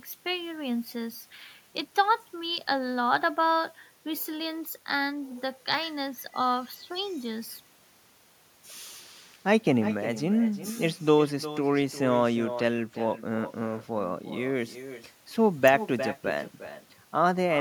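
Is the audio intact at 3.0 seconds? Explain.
No. The far end's loudspeaker feeds its microphone with no echo canceller, so throughout the speech, including at 3.0 s, a thin copy trails around 400 ms behind, about 13 dB quieter.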